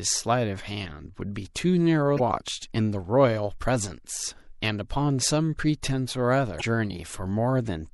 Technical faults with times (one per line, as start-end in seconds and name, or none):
0.00-7.93 MP3 compression
2.16-2.20 damaged data in a compressed stream
6.57-6.62 damaged data in a compressed stream